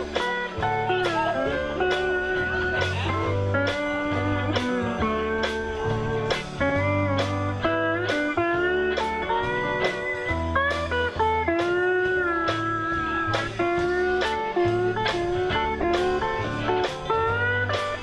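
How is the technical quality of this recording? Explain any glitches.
Two short glitches stand out: a brief chirp-like blip at 6.70–6.72 s peaking at about -15 dBFS, and a louder burst at 15.81–15.84 s reaching about -10 dBFS. Both are a corrupt frame decoded. Flipped bits in the compressed data produced wrong gains or codes, spraying energy at stray frequencies for a couple of frames, then a single frame.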